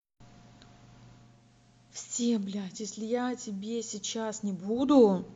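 Digital radio blending to analogue runs from 1.13 s to 4.96 s. The receiver lost its digital stream and cross-faded over about 0.4 s to the station's FM broadcast, then faded back at the end. While the speech is on FM, the level drops by about 8 dB and a steady hiss appears, sitting roughly 35 dB below the signal. The hiss is the FM noise floor the digital path did not have.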